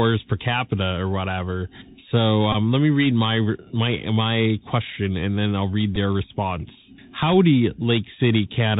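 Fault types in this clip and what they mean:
Bluetooth CVSD headset codec: A one-bit delta coder at 64 kHz tracks the waveform with an adapting step, so the whole clip stops dead at 4 kHz and carries granular hiss. A spectrogram shows a flat ceiling and a speckled noise floor, and the waveform looks stepped and ragged on loud peaks.
Bluetooth headset packet repeated: Lost voice packets were replaced by decoding the previous packet again. This happens at 2.52–2.55 s, just before "let me read my", covering about 15 ms, and at 5.96–5.98 s, just after "and then I'll read", about 7.5 ms. The waveform shows an identical 3.75 ms segment repeated, which sounds like a brief buzzy tick.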